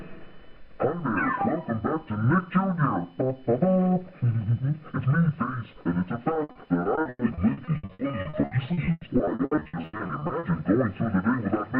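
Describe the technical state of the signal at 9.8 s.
Choppy sound with pieces missing: repeated packet loss from 6.33 to 10.45 s, dozens of gaps up to 100 ms, each patched by continuing prior sound.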